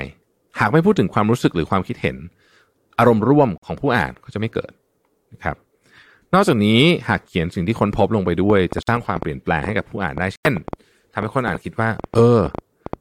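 At 3.58 s the speech drops into abrupt silence for about 64 ms, a corrupt frame muted. Damaged compressed data was rejected by the decoder and replaced with silence, and the length fits two frames. Unlike a network dropout, timing stays intact, with no skip or stretch afterward. From 8.5 s to 12.94 s a train of clicks runs over the speech, around thirty same-shaped pops at an irregular pace averaging 5.41 per second. They peak roughly 10 dB above the speech and tick through pauses too, which points to likely electrical interference rather than edit glitches. Inside that stretch the same muted-frame hole returns at 8.83 s for about 60 ms and at 10.36 s for about 105 ms, roughly five frames long.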